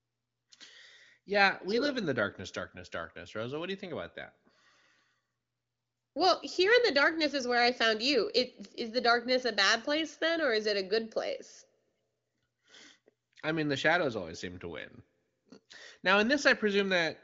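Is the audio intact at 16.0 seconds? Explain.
Yes, at 16.0 seconds the audio is intact, with no dropout, glitch or distortion at that moment.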